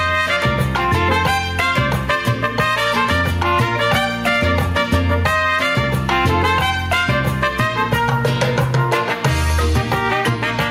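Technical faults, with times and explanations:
Throughout: gain pumping. The gain swings by about 5 dB, ducking under each loud sound. Loud and soft parts sit squashed close together. The likely cause is gain set far too high, with a fast limiter clamping every peak.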